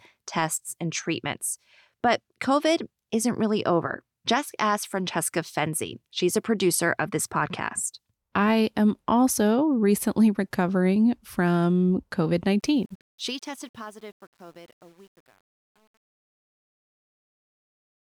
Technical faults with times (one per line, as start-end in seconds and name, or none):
12.60-18.05 truncation distortion on a fade